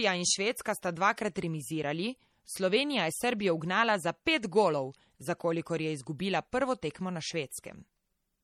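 Speech throughout the clip carries plainly audible MP3 compression damage, most likely from heavy encoding, with a watery, swirling texture where weak frequency components flicker in and out between frames, metallic chirping on s sounds, and softened consonant attacks. The degree of damage fits a low bitrate around 48 kbps. A simple low-pass filter would only dull the treble. The swirl and chirps set this apart as codec damage rather than filtering.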